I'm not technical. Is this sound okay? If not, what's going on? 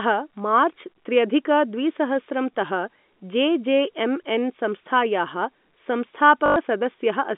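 No. At 6.46 to 6.56 s, near the end, the speech briefly turns into a robotic stutter. This is packet loss with last packet repeated. For about a tenth of a second the audio never arrived, so the phone kept replaying its last tiny chunk, giving a quick buzz that suggests 20 ms chunks. A plain dropout would leave silence. This fault fills the gap with a repeating buzz instead.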